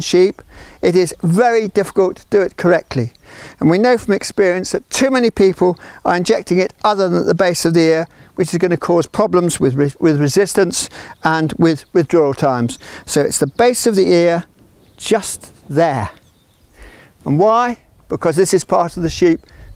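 The recording carries no audible technical faults. Nothing heard along its course points to trouble in capture or transmission.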